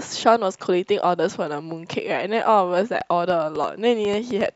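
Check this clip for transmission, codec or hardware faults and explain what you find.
A train of clicks is the one fault here, running from 3.01 s to 4.47 s. Something in the chain, likely interference from nearby equipment or a faulty connection or power supply, is injecting short pulses at about 5.5 per second, spaced unevenly. Roughly ten clicks result, each much the same shape and peaking around 10 dB above the speech. They are heard as irregular ticking or popping laid over the speech and carrying on through its pauses.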